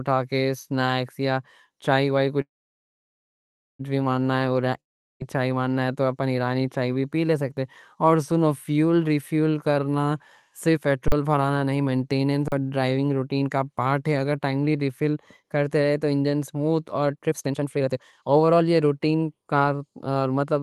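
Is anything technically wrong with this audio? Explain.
Yes, there are several network and playback faults in this speech, heard over what sounds like an Opus call at about 32 kbps with the top end stopping near 12 kHz.

Call audio freeze, 2.41 to 3.81 s: the speech stops and a brief fading tail gives way to about 1.3 s of silence. Then it resumes right where it left off, so the 1.4 s is inserted delay rather than lost speech. That likely comes from delayed packets draining the jitter buffer.

Long network dropout, 4.80 to 5.22 s: there's a short fading tail, then roughly 0.4 s of silence. The speech picks up again at "چائے منگنا تو اپن" with that stretch gone, so the audio was probably lost on the network rather than just late.

Jitter buffer speed-up, twice. From 10.68 to 15.57 s, after "سنو فیول ریفیل کرنا" and running up to "رہے تو انجن اسموٹھ", the speech runs at 111% speed with the pitch unchanged. 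Then from 17.12 to 20.44 s, after "تو انجن اسموٹھ اور", it runs at 125%. The receiver is trimming pitch-period slices to shed built-up delay, around half a second in the first stretch and about a second in the second, so both sound noticeably hurried.

Underrun with held sample, at 11.08 and 12.48 s, both inside the first speed-up: each time the output goes flat for 40 ms as the converter holds its last value. About 40 ms of live audio disappears each time.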